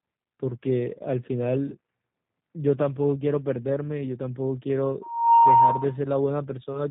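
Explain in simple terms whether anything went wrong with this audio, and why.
Two things went wrong here. The whole clip has been squeezed through the G.729 codec, a low-bandwidth phone codec that doesn't keep the actual sound wave. It rebuilds speech from a rough model of how a voice is shaped. Nothing above about 3.8 kHz survives, so the speech sounds muffled and phone-like, and the damage is easy to hear as a slightly rough, synthetic edge on every syllable.

Then, from 5.01 to 5.97 s, there's a loudspeaker feedback squeal. A microphone was picking up the speaker it was feeding, and at one pitch the sound kept going round the loop and getting louder each time. You hear a steady tone at about 934 Hz swell up over roughly a third of a second until it's much louder than the speech, then it stops just before 6 s.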